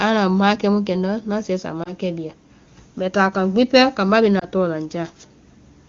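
A brief dip or warble interrupts the speech just after "ŋna sɛɛ sa", from about 1.83 to 1.92 s, and again after "kambá bee", from 4.39 to 4.45 s. These are lost AMR speech frames. In each case a single 20 ms frame failed its check, so the AMR-WB decoder, whose clean sound elsewhere fits its highest rate, repeated the previous pitch and vocal tract settings at reduced gain before normal decoding resumed.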